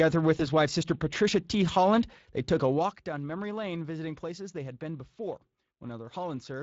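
Throughout, the Speex codec leaves the speech hoarse and grainy, consistent with roughly 20 kbps. This is a steady coding roughness, not robotic vocoder buzz. From 0.37 to 0.42 s, VoIP packet loss concealed by the speech codec stretches one missing 20 ms frame into a brief fading tone or noise rather than a silent gap.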